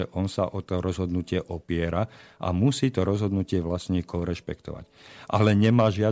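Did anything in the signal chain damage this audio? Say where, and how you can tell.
No, nothing in the signal chain damaged this audio.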